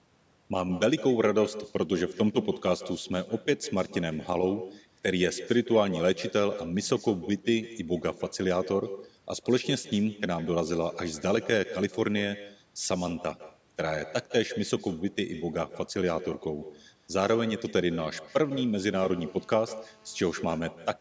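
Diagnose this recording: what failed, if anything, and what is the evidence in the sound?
Throughout, the speech is shadowed by a thin copy about 15 dB down, roughly 150 ms late: echo with no canceller at the far end's call processing stage.

From 18.45 to 20.58 s a hard, raspy 217 Hz buzz sits steadily about 31 dB below the speech: GSM phone buzz, with radio bursts rectified in the analogue wiring.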